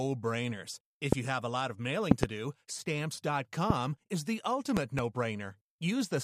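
A sudden voltage pulse entering the signal chain, likely from a plug, switch, static discharge or driver glitch, produces loud pops over the speech, which continues underneath. Single pops land at 1.12 to 1.15 s and 3.70 to 3.73 s. Double pops in quick succession fall at 2.11 to 2.26 s and 4.77 to 5.01 s. The first two events peak roughly 25 dB above the speech and the later two roughly 20 dB, so each sounds like a sharp, intrusive thump.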